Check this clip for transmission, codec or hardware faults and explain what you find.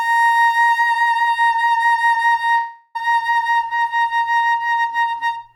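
One fault turns up in this music clip. A long network dropout runs from 2.57 to 2.97 s. The likely cause is a break in delivery of roughly 0.38 s, during which the receiver had nothing new to play. It covered the gap by stretching the last received sound into a fading buzz for about 0.37 s, never dropping to silence. The music then resumes further along, with that stretch of the performance simply missing.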